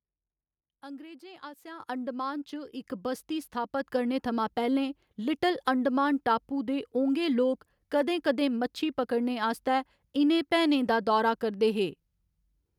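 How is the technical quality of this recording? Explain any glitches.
The recording has two abrupt level jumps early on. At 1.8 s and again at 2.82 s, voice and background noise leap up together, by about 10 dB and then about 5 dB: the microphone volume stepped up, as call software raised the device's input gain in single steps after judging it too quiet.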